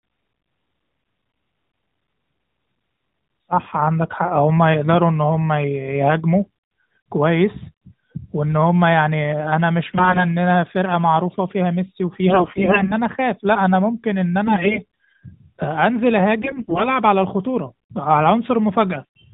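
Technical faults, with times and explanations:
6.42–6.50 s, 9.88–10.25 s, 12.30–12.93 s, 14.46–14.79 s and 16.42–16.90 s: AMR bit errors. Flipped low-priority frame bits misplace excitation pulses and skew fine pitch and gain, so speech turns scratchy and gargly.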